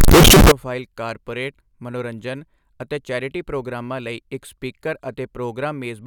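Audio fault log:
0.00–0.52 s, float read as integer: the first half-second of speech blasts out as harsh, near-square buzz at an almost fixed, high level, with background noise as loud as the talking, though pitch still comes through. Likely 32-bit float samples read as 32-bit integers.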